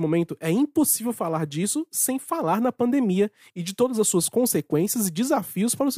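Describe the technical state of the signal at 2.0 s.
At 2.0 s the speech signal is intact, with no audible dropout, distortion, clipping or other technical fault at that moment.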